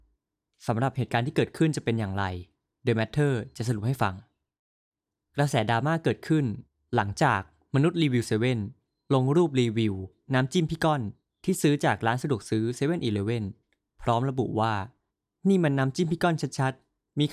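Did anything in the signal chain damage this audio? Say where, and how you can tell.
No, nothing along the chain seems to have damaged this speech recording; I can't hear any point where the signal was harmed on its way through.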